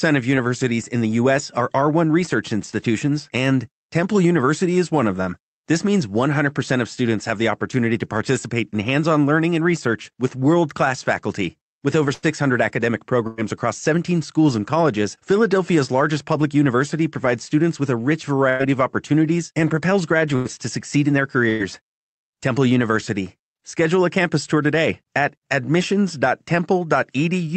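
The speech clip has five bursts of packet loss, at 12.13, 13.27, 18.49, 20.36 and 21.49 s. At each one about 60 ms of audio is lost. The receiver covers the gap by extending the last sound for roughly 95 to 107 ms and fading it, so voiced sounds turn into a brief held buzz and other sounds into a decaying hiss. On a spectrogram this shows as flat, unchanging harmonic lines or smeared noise that weakens toward the gap's end. The speech then resumes with a jump, and each burst adds about 35 to 47 ms of delay.

Three jitter buffer speed-ups follow as the receiver works that delay back down. They run from 12.42 to 13.99 s, 18.63 to 19.12 s and 20.97 to 22.48 s. Short pitch-period pieces are removed repeatedly, so the speech runs about 5 to 6 percent fast at unchanged pitch and sounds slightly hurried. Roughly a tenth of a second, a few hundredths, and under a tenth are trimmed in those three stretches. 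On a spectrogram the harmonic spacing stays the same while syllables are compressed in time, and the waveform shows small cycle-length splices.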